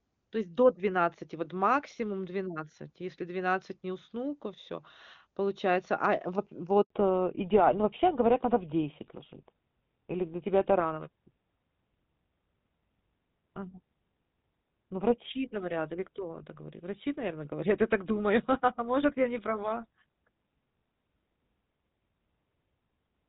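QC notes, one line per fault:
6.82–6.90 s, handover gap: right after "а э вот" the speech cuts to silence for 80 ms, as if no frames arrived while the call switched networks.
6.90 s to end, fallback to narrowband: everything above 4 kHz vanishes and speech turns duller and rougher, which fits a drop from HD Voice to GSM full rate.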